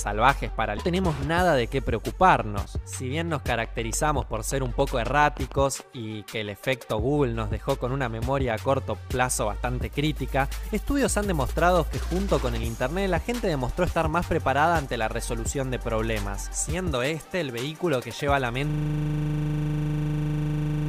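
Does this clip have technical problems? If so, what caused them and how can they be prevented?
Yes, four.

Skip ahead at 0.77 s: a stretch of about a second was dropped in transit or by an overflowing jitter buffer, so playback jumps forward with no gap. Prevention: size the jitter buffer generously and use loss-resilient transport.

Jitter buffer speed-up from 0.87 to 2.12 s: the buffer held excess audio, so the receiver trimmed short pieces, roughly 70 ms in total, and the sound runs at 105% speed with unchanged pitch. Prevention: smooth network delivery so packets don't arrive in bursts.

Train of clicks from 3.36 to 5.81 s: about twenty similar pops at a regular pace of about 7 per second, peaking about 5 dB above the sound, likely from interference by nearby equipment or a faulty connection or power supply. Prevention: shield and separate cables, and check the audio interface and its drivers.

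System hang loop from 18.70 s to the end: the computer or driver froze while the hardware kept cycling one 40 ms buffer, repeating it 55 times as a 25 Hz stutter-buzz. Prevention: fix the driver or system stall and add a watchdog that mutes output on a hang.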